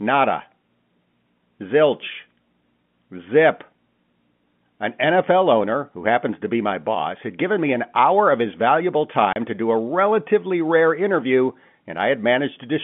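At 9.33 s, right after "hour of his valuable" and before "to do", the speech drops into a 30 ms hole of dead silence with hard edges. This is packet loss filled with silence: the gap points to a single lost packet replaced by silence, heard over the telephone-band G.711 line.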